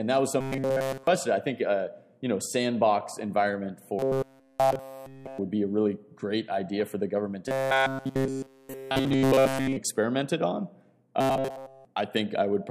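A rigid, metallic buzz at 134 Hz runs through the sound from 0.41 to 1.07 s, 3.99 to 5.38 s, 7.48 to 9.76 s and 11.21 to 11.85 s, keeping only its rough contour. This is robotic sound from repeated short buffers, likely caused by audio arriving too seldom. Nearly all of each stretch is one short slice of about 7.5 ms replayed over and over, which imposes the 134 Hz buzz.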